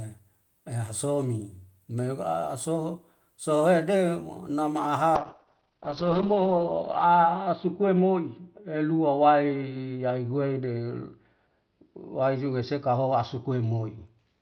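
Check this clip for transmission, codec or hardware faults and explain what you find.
A call bitrate drop starts at 5.17 s and lasts to the end of the clip. The encoder's budget falls from 32 to 7 kbps, holding its lowest for 1.13 s, and the bandwidth narrows from 20 kHz to 6 kHz, so the speech turns coarse, watery and muffled.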